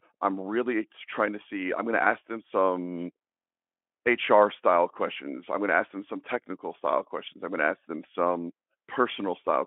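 No technical faults can be heard anywhere in the speech. The Speex path gives it a telephone-like band of about 250 Hz to 3.4 kHz, and any codec roughness is faint at most, which fits a fairly generous setting around 18 kbps.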